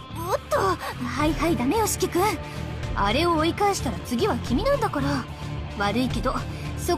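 No technical faults can be heard anywhere in this recording.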